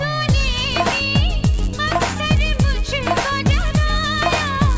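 From 1.54 s to the end, the resampler restarts on every block: 10 ms blocks converted 48 kHz to 16 kHz independently, leaving edge errors that buzz at 100 Hz under the signal.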